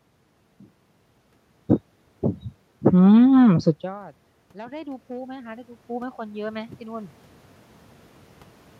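At around 3.5 s the voice drops away as the talker moves back from the microphone, and from 3.47 s to 7.18 s automatic gain rising follows. Finding the input suddenly about 24 dB quieter, the gain control climbs slowly by about 12 dB over nearly four seconds. What separates this from the movement itself is that the room noise swells upward along with the voice, whereas a talker's movement changes only the voice.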